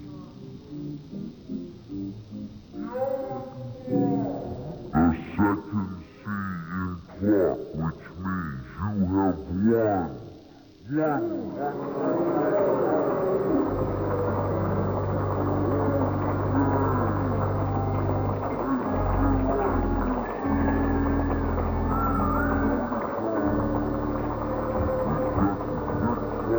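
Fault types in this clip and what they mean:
stereo read as mono: The interleaved left and right samples have been read in sequence as one channel, so the whole clip plays at half speed and a full octave low (12 semitones down). On a spectrogram, a fainter mirrored copy of the content sits in the upper half of the frequency range.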